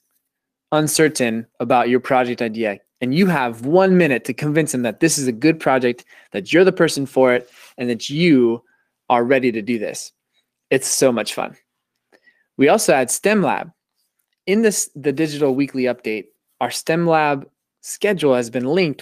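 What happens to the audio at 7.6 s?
A lost packet rebuilt from error correction runs from 7.35 to 7.57 s, ending just before 7.6 s, between "you're the person for" and "and that you are". Six separate packets went missing, but each following packet carried a low-bitrate backup copy, and the decoder played those copies instead, about 120 ms of rebuilt audio in all. Nothing drops out, but that stretch sounds rougher and noisier than the speech on either side.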